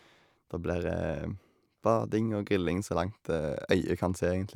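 Nothing in this recording stands out as a technical fault, so there's no moment to point to and no problem to describe.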